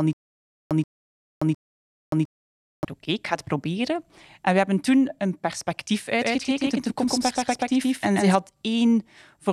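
From the very start to 2.85 s, the speech has a stutter with silent gaps. It is already under way when the clip begins. A 131 ms burst plays, then about 576 ms of dead digital silence follows. The cycle repeats every 707 ms, three times in all. The player or stream likely stalled and replayed its last fragment at each retry. The audio meant for those gaps is gone. Normal speech resumes with "oké ik ga het".

Just after "hebben toen een perspectief", at 6.21 s, a doubled audio track appears. It lasts until 8.35 s. A second full-band copy of the speech trails about 150 ms behind, at roughly the same level. It has no decay and no room colour. It cuts in and out abruptly at those times. The likely cause is the signal being captured twice through a slower path, or an edit holding two offset copies.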